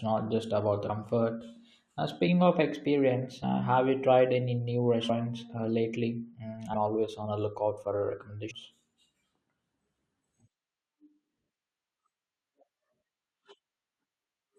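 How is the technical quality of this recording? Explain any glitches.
The speech recording has repeated dropouts from compressed frames skipped, at 0.88, 2.27, 3.42, 5.09, 6.73, 8.50 and 14.24 s. At each point the decoder never plays a run of 21.3 ms frames, so the speech jumps ahead by roughly 70 to 200 ms.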